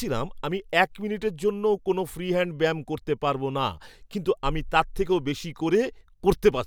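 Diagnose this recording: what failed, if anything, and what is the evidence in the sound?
Nothing in the signal chain has failed: the speech recording carries no audible defect from any stage between capture and playback.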